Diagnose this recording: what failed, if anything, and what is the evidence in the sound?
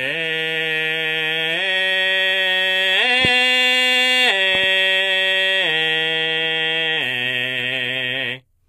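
HE-AAC compression runs through the whole music clip, a codec-stage fault. The treble sounds gritty and metallic, and nothing reaches above 14.5 kHz. The damage is plainly audible, which fits a bitrate around 24 kbps. The likely cause is spectral band replication: the top octaves are rebuilt from copied lower bands, so their harmonics fail to align with the real ones.

A loud pop lands at 3.25 to 3.27 s, about 15 dB above the music, followed by a weaker double pop from 4.55 to 4.66 s, about 5 dB above it. The music carries on underneath each one. This points to a likely voltage step or pulse in the analogue wiring or converter, such as static or a connector disturbance, that the following circuitry shaped into short clicks.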